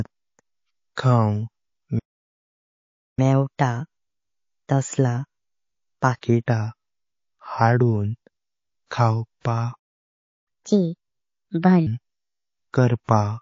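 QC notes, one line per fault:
throughout, MP3 compression: the whole clip sounds watery and swirly, with dull treble above a fixed cut-off and a metallic chirp on s sounds. This is likely a low-bitrate MP3 encode, fitting about 32 kbps, where weak frequency lines flicker between frames. Unlike pre-echo, it never lets up.
1.99–3.19 s, playback stall: the sound halts mid-flow for about 1.18 s, then resumes where it stopped. The player probably ran dry of data or was blocked. Unlike a dropout, nothing is lost; the gap is followed by hurried playback.
3.19–6.19 s, catch-up at higher speed: after the first stall the sound runs 1.15 times fast, about two semitones high, for 3 s, then settles. The player is resampling its backlog to regain lost time, so tempo and pitch rise together, unlike a pure pitch shift.
9.76–10.48 s, playback stall: a second silence of about 0.69 s interrupts the sound mid-flow, again picking up at the same point. 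It has the same starved-player character as the first, shorter but followed by stronger catch-up.
10.48–11.87 s, catch-up at higher speed: here the backlog plays at 1.5 times speed, roughly seven semitones up, for about 1.4 s before returning to normal. Faster recovery after a shorter gap makes this burst far more obviously chipmunk-like than the first.
8.86 s, 9.40 s, 13.04 s, pre-echo: a hiss about 16 to 20 dB above the surrounding noise swells for roughly 48 ms just before each sharp onset, softening the attack. Noise spread across 72 ms long blocks with no short-block switching leaks ahead of the transient, unlike MP3's steady swirl.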